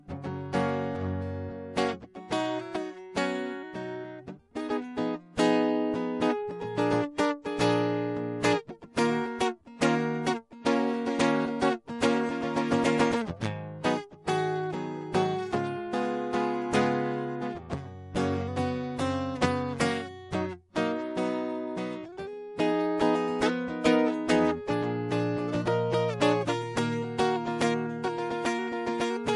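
Throughout the music, MP3 compression damage is plainly audible: nothing sounds above about 11.3 kHz, and the treble swirls watery, with metallic chirps on cymbals. This likely comes from a low bitrate around 48 kbps. A spectrogram shows a hard ceiling at 11.3 kHz and flickering, patchy upper bands.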